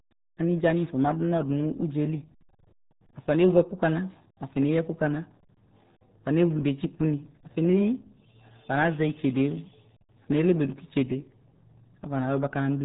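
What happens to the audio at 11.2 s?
At 11.2 s the speech still carries the RealAudio 14.4 codec damage heard across the whole clip. Nothing above 3.8 kHz survives. The heavy low-rate coding, which fits an 8 kbit/s speech codec, leaves the speech muffled and gargly.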